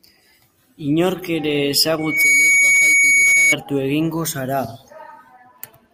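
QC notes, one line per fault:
1.98–3.56 s, loudspeaker feedback squeal: a single 2.2 kHz tone swells within about a third of a second to roughly 10 dB above the speech, as the microphone re-amplifies the loudspeaker it feeds; a bright horizontal spectrogram line, a ballooning waveform envelope.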